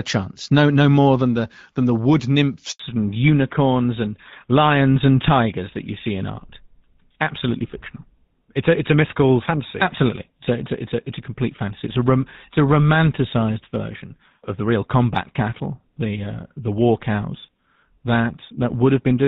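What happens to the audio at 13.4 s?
At 13.4 s the sound is still in the fallback to narrowband that began at about 2.8 s and runs to the end of the clip. The call has switched from AMR-WB at 12.65 kbit/s to GSM full rate at 13 kbit/s, so nothing above 4 kHz survives and the speech sounds duller and rougher. Unlike a plain low-pass filter, the change arrives as an abrupt step at 2.8 s and brings the older codec's coarser texture with it.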